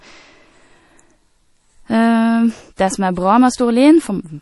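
From start to finish the speech carries plainly audible MP3 compression damage, likely from encoding at a low bitrate, with the sound pointing to something around 48 kbps. Nothing reaches above 11.5 kHz, so the treble stops abruptly there. Starved of bits, the encoder drops weaker frequency detail that flickers in and out between frames, giving a watery, swirly texture, chirpy metallic sibilants and smeared consonant onsets.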